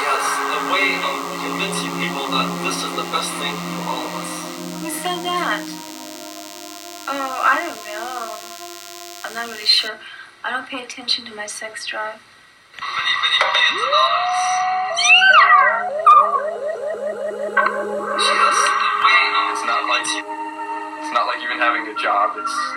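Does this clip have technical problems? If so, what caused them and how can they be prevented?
Yes. DECT cordless phone buzz runs from 0.0 to 9.88 s. A nearby DECT handset or base sends a radio burst every 10 ms. The audio circuit rectifies it into a thin 100 Hz buzz with many harmonics, about 20 dB below the signal. Keep DECT phones and bases well away from microphones and audio cables.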